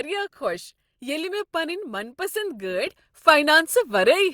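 A speech recording with a sudden gain jump at 2.87 s: the level steps up by about 6 dB from one sample to the next and stays there to the end. The background noise rises by the same amount at the same instant, which separates it from a speaker simply talking louder or an automatic gain control easing in. The step is instant, not ramped, so the likely cause is a digital gain setting applied without smoothing.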